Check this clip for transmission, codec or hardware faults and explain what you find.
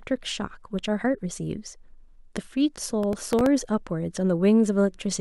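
One fault: processor overload crackle from 3.03 to 3.46 s, where very short buffers, each a millisecond or two, kept missing deadlines and were refilled with stale audio, producing gritty tearing. The waveform shows several hard-edged discontinuities, and the spectrogram shows thin broadband vertical streaks.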